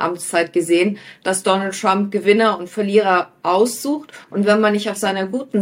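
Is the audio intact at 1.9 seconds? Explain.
Yes, the audio is intact at 1.9 seconds, with no dropout, click, distortion or other fault at that point.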